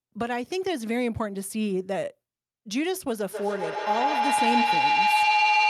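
From 3.31 s to the end of the clip, a tone near 1 kHz swells out of the speech and keeps growing, peaking at about 6 dB above the talking, and it pulses roughly every 150 ms. This is feedback howl: two devices in one room share the call, so sound from a loudspeaker re-enters a microphone and returns louder on each pass. The loop's favoured frequency takes over, and the pulsing follows the loop's delay.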